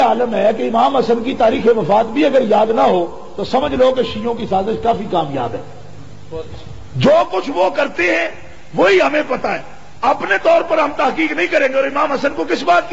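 No dropouts, clicks, distortion or level and timing faults can be heard anywhere in the clip.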